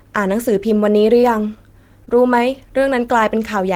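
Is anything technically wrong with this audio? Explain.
Yes. At 1.21–1.25 s and again at 2.05–2.09 s the speech briefly smears and wobbles: short concealed packet loss. About 20 ms of audio arrived too late, so the receiver extended the preceding sound to fill the gap before blending back.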